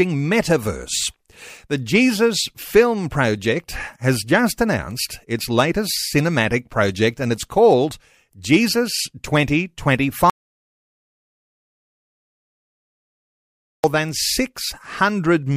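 A speech recording that cuts out abruptly at 10.30 s into dead digital silence, with no room tone at all, and resumes mid-flow at 13.84 s. That is an audio dropout to silence, about 3.5 s lost, likely from the input briefly disconnecting while the recorder kept writing zeros.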